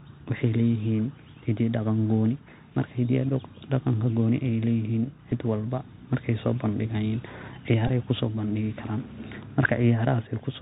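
Throughout the speech, the Bluetooth CVSD headset codec squeezes the signal through one-bit up/down steps, which fits a 64 kbps stream. Nothing above 4 kHz survives, s sounds come out scratchy, loud bright moments distort as the step size lags, and a granular hiss sits underneath.

At 5.31 s, just before "walba markayso", a lost packet is replaced by the previous one (Bluetooth headset packet repeated), leaving a small tick. From 7.88 to 7.90 s a run of about 15 ms repeats every 3.75 ms, producing a brief buzz near 267 Hz.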